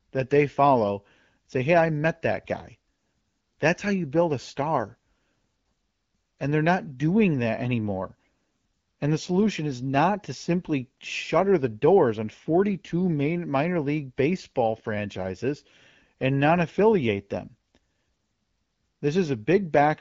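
A speech recording carried over the AMR wideband (HD Voice) codec at 12.65 kbit/s, with nothing technically wrong with it.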